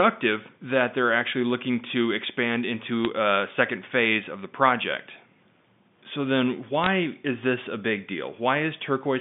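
At 3.05 s, after "actually looking to expand", and from 6.84 to 6.87 s, just before "is this a big", bit errors on the digital phone line flip single G.711 samples, each error changing one sample. The second burst is denser, crackling over the band-limited telephone sound.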